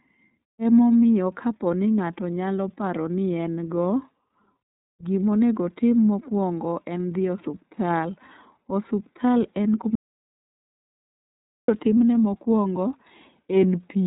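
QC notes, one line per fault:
Throughout, iLBC codec: the speech is band-limited with nothing above about 3.8 kHz, giving a muffled telephone tone, and it has a rough, slightly synthetic grain. That grain comes from each 30 ms frame's excitation being coded on its own at what sounds like a 13.33 kbps rate. Plain low-pass filtering would dull the sound without adding that buzzy texture.
9.95–11.68 s, audio dropout to silence: the speech cuts off mid-flow and the signal falls to silence for 1.73 s, with no room tone or hiss in the gap, before resuming at "timne mokuongo". This was likely lost input, such as a dropped link or a brief mute, and it differs from a pause because the background vanishes entirely.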